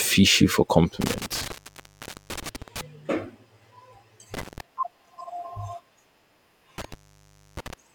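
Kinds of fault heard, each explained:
Intermittent contact: a loose plug or cable connection opens the signal path. The speech cuts out three times, for 0.78 s near 1.0 s, 0.16 s near 4.3 s and 0.63 s near 6.8 s, each gap edged by crackle and filled with faint hiss.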